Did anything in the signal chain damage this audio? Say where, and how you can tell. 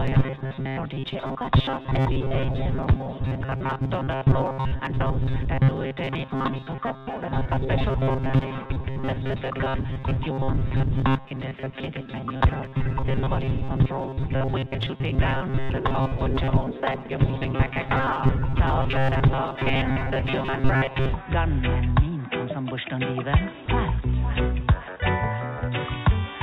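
Yes. The buffer stage of the call path was starved. From 0.01 s to 21.14 s the sound takes on a rigid, metallic buzz at 133 Hz. That is the fingerprint of robotic sound from repeated short buffers. When fresh audio arrived too late, the same fragment of about 7.5 ms was replayed, one period of 133 Hz, while roughly half of the real audio was skipped. The repetition imposes that fixed pitch. The likely cause is a jitter buffer running dry.

The call processing stage briefly cut the signal. At 23.66 s to 23.68 s the sound drops out and steady comfort noise fills about 20 ms, with roughly 10 ms of the actual audio lost. This is sound dropped by the voice detector. The sender judged that stretch to be background and stopped transmitting, and the receiver substituted comfort noise until transmission resumed. A misfiring detector is the likely cause, and the sound returns as soon as it triggers again. 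Separately, nothing is present above 4 kHz, the normal band limit of the G.711 A-law codec on this call path.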